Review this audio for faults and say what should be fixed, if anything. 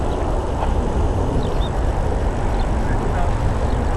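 The whole clip carries plainly audible MP2 compression damage: it sounds dull, with a gurgling, granular grain. This likely comes from MPEG Layer II coding at a rate around 80 kbps, where too few bits force the encoder to switch off upper sub-bands and coarsely quantise the rest. On a spectrogram, the high bands flicker on and off in blocks. To prevent it, encode at a higher bitrate or use a more efficient codec.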